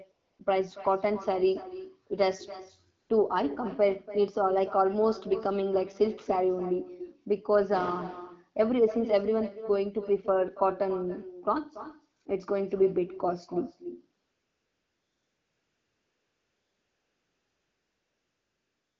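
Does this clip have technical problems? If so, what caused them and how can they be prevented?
Yes. There's echo with no canceller throughout: every phrase comes back about a third of a second later, roughly 15 dB down and thinner, because the far end's loudspeaker feeds its microphone and nothing subtracts it. Enabling acoustic echo cancellation on that device, or using a headset there, prevents it.

There's also AMR comfort noise at 0.11 to 0.39 s, 3.01 to 3.09 s, 12.23 to 12.25 s, and from 14.21 s to the end. The sender judged those stretches silent and stopped sending speech frames, so the receiver filled them with smooth synthetic noise that switches in and out against the real background. Relaxing the voice activity detection or turning off discontinuous transmission on the sending side avoids it.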